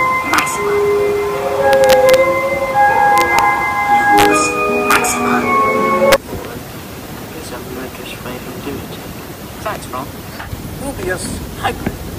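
Integer overflow occurs six times: 0.34–0.39 s, 1.73–2.14 s, 3.18–3.39 s, 4.18–4.25 s, 4.91–4.96 s, and a single crack at 6.12 s. Loud passages were driven past the integer ceiling by about 1 dB, or about 3 dB at 3.18, 4.91 and 6.12 s. Instead of being limited, those peaks wrapped to the opposite extreme. Each jumps across the full range, producing harsh, violent cracks far sharper than clipping.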